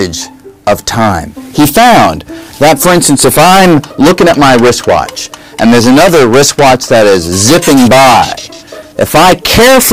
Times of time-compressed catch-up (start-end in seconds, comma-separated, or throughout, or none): none